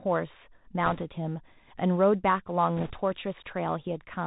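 Throughout, the speech sounds muffled above 4 kHz, with scratchy s sounds and a granular hiss. This is the Bluetooth CVSD headset codec, whose one-bit delta coding fits a 64 kbps link. From 0.86 to 1.02 s, and again from 2.77 to 2.92 s, a rushing, crackly noise rises without sharp clicks. These are bit errors on a Bluetooth voice link, with a few percent of bits flipped and the second burst slightly worse.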